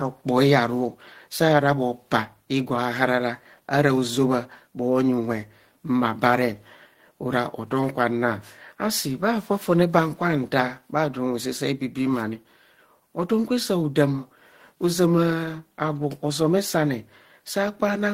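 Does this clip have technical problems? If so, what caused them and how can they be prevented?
No, there are no technical problems in this recording.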